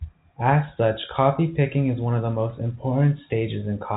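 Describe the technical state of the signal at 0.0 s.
At 0.0 s the speech is intact, with no fault present; the G.711 telephone coding is working as expected here, leaving the sound band-limited with nothing above about 3.8 kHz.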